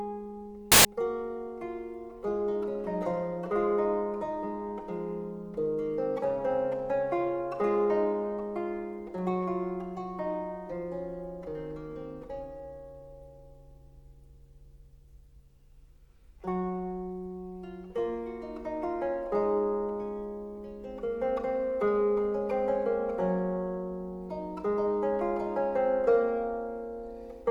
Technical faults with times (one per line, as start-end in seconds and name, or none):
0.72-0.85 samples built from the wrong bytes